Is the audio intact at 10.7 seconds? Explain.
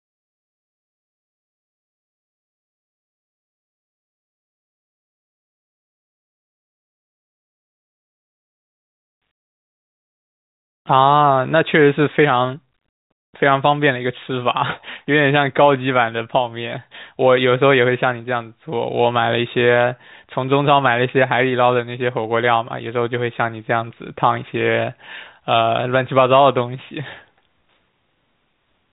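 Yes, the audio is intact at 10.7 seconds, inside the narrow telephone band that G.711 telephone coding leaves, which stops at about 3.8 kHz.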